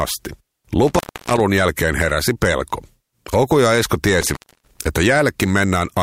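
Intermittent contact occurs at 0.87 to 1.40 s, just before "jälkeen heräsi", and again at 4.21 to 4.79 s. A loose plug or cable briefly opens, dropping the speech for about 296 ms and then 274 ms, with crackle at each break and faint hiss in the gaps.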